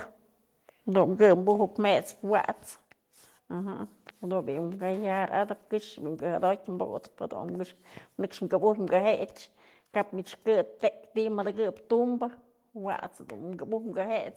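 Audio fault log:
1.22–1.33 s, microphone overload: the loudest part of the voice gets a harsh, crackly edge because the peaks run about 2 dB past the converter's ceiling and their tops get sheared flat. Only a couple of percent of samples are hit, most likely because the mic input gain was set too high.
1.35 s, microphone volume stepped down: right after that distorted burst, the voice and the background both drop by about 4 dB in a single step. That sudden level change is likely the call software reacting to the clipping and cutting the device's input volume at once.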